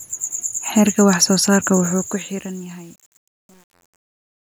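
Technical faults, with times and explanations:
1.84–4.59 s, truncation distortion on a fade: as the speech fades out, the level is cut to coarse steps, which fits an 8-bit word length with no dither, so it turns gritty from about 2.07 s onward.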